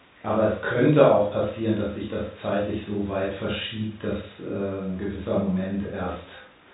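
The speech carries the narrow band of G.711 telephone coding, with nothing above 3.8 kHz, and no technical fault can be heard anywhere in the signal.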